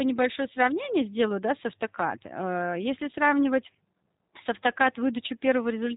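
From start to finish the speech has the clear stamp of a G.729 codec: nothing survives above about 3.8 kHz, and the voice comes out rough and a bit synthetic. The coder rebuilds it from a vocal-tract filter, a pitch predictor and a few pulses per frame, which fits an 8 kbit/s stream.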